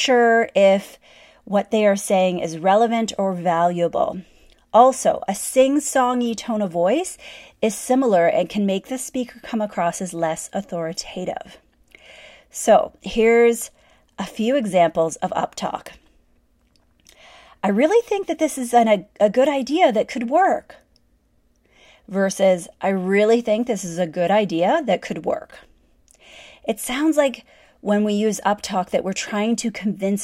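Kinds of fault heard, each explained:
No technical faults detected.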